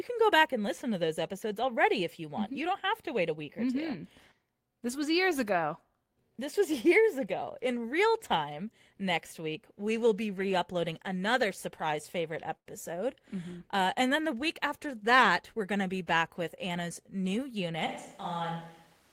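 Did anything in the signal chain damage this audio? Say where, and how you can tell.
Yes. At the network stage, a short stall from a late packet hits at 12.57 s, right after "uploading another surprise favorite": the jitter buffer ran dry and the receiver held the last sound for about 89 ms until the packet arrived. Nothing is lost, but that sound drags audibly.

A jitter buffer speed-up follows from 15.30 to 16.70 s, after "then the week after". The receiver trimmed pitch-period slices to shed about a tenth of a second of excess delay, so the speech runs at 106 percent speed, hurried but at unchanged pitch.

From 17.87 s to the end, the sound abruptly turns roomy and hollow, drops about 5 dB in level, and gains a noise floor roughly 30 dB below the speech. The likely cause is a switch to a distant microphone after the close one dropped out of the recording chain.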